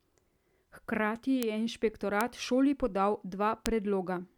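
At 1.43, 2.21 and 3.66 s the speech carries a bit error spike, a single sharp tick reaching about -7 dBFS: one flipped bit throws one sample (three at 3.66 s) off by a power of two. Unlike a dropout, no gap follows.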